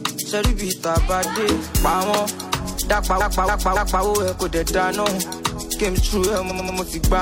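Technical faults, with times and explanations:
3.16–4.00 s and 6.46–6.74 s, repeated frames: the audio stutters as a 0.28 s block and later a 0.09 s block each play four times in a row. Runs of compressed frames were duplicated before decoding, lengthening the audio by 0.84 s and 0.28 s.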